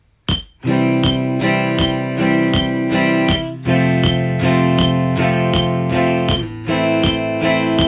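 No faults detected anywhere in the audio.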